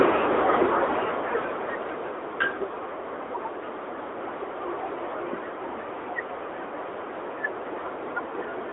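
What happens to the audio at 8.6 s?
At 8.6 s the speech is still passing through the AMR narrowband mobile codec, which affects the whole clip rather than a single event. The codec rebuilds speech from a vocal-tract model excited by sparse pulses in short frames, sampled at a rate that leaves nothing above 3.8 kHz. The band sits roughly between 250 Hz and 3.6 kHz, giving a thin telephone sound with plainly audible buzzy, synthetic coding damage, consistent with a mid-range rate near 10 kbps.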